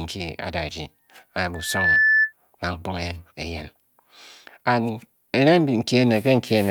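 From 1.54 s to 2.33 s a loudspeaker feedback squeal rises out of the speech: a single tone at 1.8 kHz that swells over a few tenths of a second until it sits about 5 dB above the voice. The microphone is hearing the loudspeaker it drives, and at 1.8 kHz the loop gain tops unity. Unlike a steady interfering whistle, which appears at full level, this tone builds on itself from nothing.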